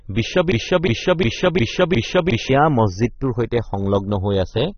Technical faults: channels drifting apart; AAC compression; broken-record loop

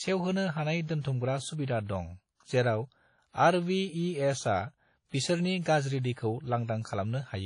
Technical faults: WMA compression; pre-echo

